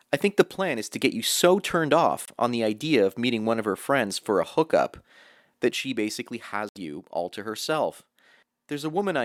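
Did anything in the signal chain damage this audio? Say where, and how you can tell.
Yes. One channel drops out from 0.43 to 0.91 s, after "I think the" and before "to get you so", and again from 5.71 s to the end. The level falls abruptly by about 6 dB. The sound is otherwise unchanged. A failing analogue connection or cable is the likely cause.

There are two Bluetooth dropouts, at the network and playback stage. The first runs from 2.25 to 2.30 s, between "get you so turned" and "on the idea of". The second runs from 6.69 to 6.78 s. Each is a silence. The missing audio fits one lost frame of about 23 ms, then three lost frames of about 70 ms. Speech resumes later, as if it had played on. Packets likely arrived too late at the headphones.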